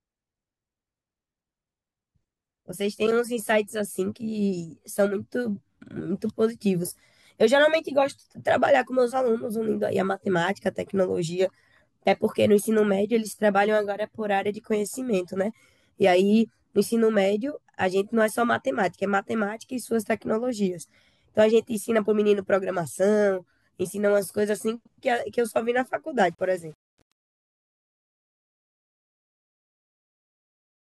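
From 26.24 s the fade-out shows truncation distortion. The stage drops bits without dither, which fits an 8-bit path, so from 26.7 s the tail turns gritty.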